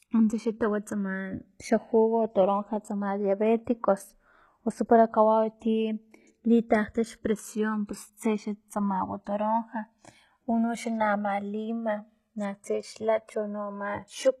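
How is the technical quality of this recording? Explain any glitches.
The recording has two faults, and both run through the whole clip.

From start to end, channels drifting apart cause slow flanging. Two sources on separate clocks differ by roughly 200 ppm. Their delay slides to about 2 ms, so comb notches sweep when summed to mono.

Throughout, the treble is plainly damaged, with gritty, metallic s sounds. The likely cause is HE-AAC compression at a low bitrate, around 16 kbps. The upper band is rebuilt from copied lower bands, so harmonics misalign.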